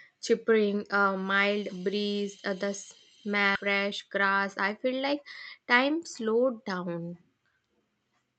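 This is speech carried over a call path whose Opus coding limits the sound to about 8 kHz. At 3.55 to 3.57 s there is a skip ahead. Roughly 0.4 s of speech is missing. Playback jumps forward with no gap filling the join. The jitter buffer likely dropped audio that had piled up while later packets were already waiting. Just after, from 3.65 to 5.35 s, comes a jitter buffer speed-up. The speech runs at 109% speed with unchanged pitch and sounds hurried. Short pitch-period pieces, around 150 ms in total, were cut to bring the buffer delay back down.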